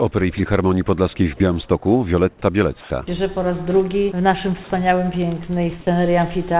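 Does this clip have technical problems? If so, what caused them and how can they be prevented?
Yes. From 2.81 to 2.9 s, the background turns into steady, featureless noise, likely comfort noise in place of the background after discontinuous transmission paused sending. It differs from a dropout because the level barely falls, by about 1 dB, rather than going silent. To prevent it, disable discontinuous transmission or voice-activity detection on the sending side.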